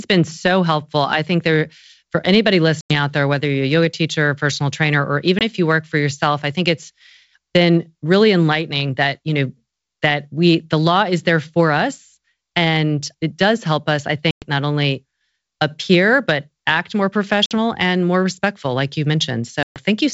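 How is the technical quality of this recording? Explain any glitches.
Five short dropouts, each caused by packet loss on an ADPCM call, interrupt this speech; the G.722 wideband coding itself, at what sounds like 64 kbit/s, adds at most faint damage. The gaps fall at 2.81, 5.39 (after "a personal trainer or"), 14.31 (after "does help us I"), 17.46 (after "appear but act more") and 19.63 s, losing 20 to 130 ms of audio each. Silence fills the holes with hard edges, and because the decoder's adaptive predictor and step size fall out of step with the sender's, each resumption sounds slightly distorted, settling within tens of milliseconds.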